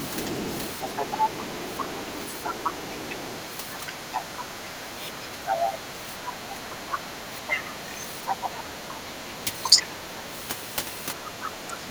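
A faint second voice runs underneath the speech from 0.0 to 10.21 s, roughly 15 dB below it, and returns briefly from 11.24 to 11.5 s at about 20 dB down. This is the other side's voice leaking through, likely because the echo canceller left loudspeaker pickup in the microphone signal. The main talker's level also dips in short pieces at 2.03–2.11 s, 3.83–5.37 s, 6.55–7.57 s and 8.78–10.29 s, by roughly 5 to 15 dB, and then drops away almost completely, around 30 dB, from 11.38 s to the end. That is speech suppressed in double talk, likely the canceller turning everything down while both sides were speaking at once.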